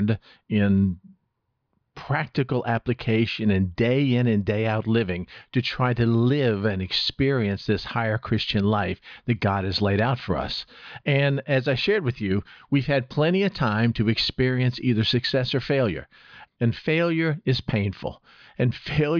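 The speech recording shows no technical faults at any point in the signal.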